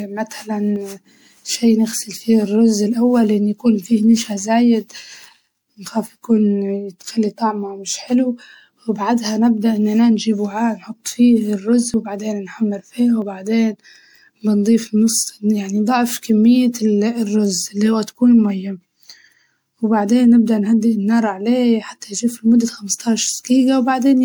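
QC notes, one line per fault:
Throughout: generation loss, likely from about seven successive MP3 passes at 128 kbit/s. Each re-encode quantises on a shifted frame grid, so the speech sounds swirly, hollow and smeared, with softened consonant attacks. On a spectrogram, patchy holes and smeared high-frequency detail appear.
0.76, 11.94 and 13.22 s: dropped buffer (overrun). Each is a jump with the speech skipping ahead, likely as about 20 ms of audio is missing and the two sides are butted together. The waveform shows a sudden discontinuity with no gap, and the spectrogram a thin vertical broadband line.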